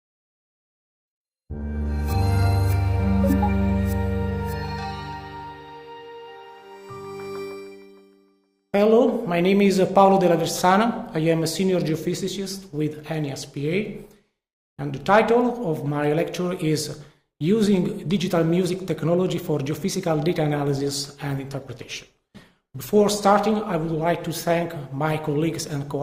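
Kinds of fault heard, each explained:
Adaptive stream at a lower bitrate: the connection slowed and the player switched to a leaner encoding from 20.08 s, so quality changes abruptly and artefacts rise, with no gap.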